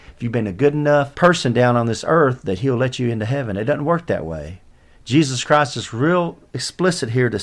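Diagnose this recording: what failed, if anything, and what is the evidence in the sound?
Nothing failed here as far as I can hear; the speech comes through without a single dropout, click, glitch or stumble anywhere in the recording.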